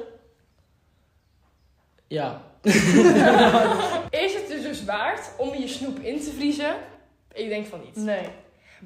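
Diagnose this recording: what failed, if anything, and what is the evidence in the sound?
At 2.14 s and again at 5.24 s the sound jumps abruptly, with no gap of silence, as if a few milliseconds had been cut out and the ends spliced together. The stage is the driver or buffer, and the likely cause is a dropped buffer (overrun): samples were overwritten before the program read them. On a waveform each spot shows a sudden discontinuity; a spectrogram shows a thin vertical broadband line there.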